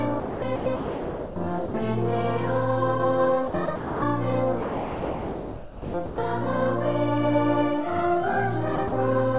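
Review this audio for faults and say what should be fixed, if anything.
The sender's voice detector likely kept switching between sending and muting, which produced sound chopped by the voice detector at 0.2–1.36 s, 3.48–4.02 s, 4.62–6.18 s and 8.76–8.92 s. Stretches of real sound, about 0.92 s, 0.34 s, 1.44 s and 0.06 s respectively, are replaced by comfort noise. The result is choppy.

At 1.66–1.74 s the detector probably judged a quiet passage to be background and stopped sending, so this is sound dropped by the voice detector. For 80 ms the sound gives way to steady comfort noise and then returns. The narrow G.711 band, with nothing above 4 kHz, is audible throughout.

To prevent this, lower the detector's threshold and add hangover time, or disable silence suppression on the sending side.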